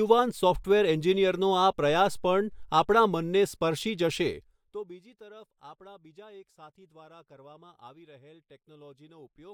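Listening to this speech recording, nothing technical stood out.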